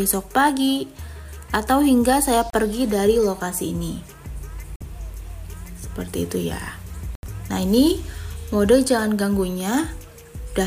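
The audio drops to dead silence three times: for 32 ms at 2.50 to 2.54 s, for 47 ms at 4.76 to 4.81 s, and for 79 ms at 7.15 to 7.23 s. Each gap is a clean cut with no fade, and the sound then carries on. This is most likely a Bluetooth stall: interference delayed packets on the wireless link, the headphones' buffer emptied, and playback paused until the retransmitted data arrived.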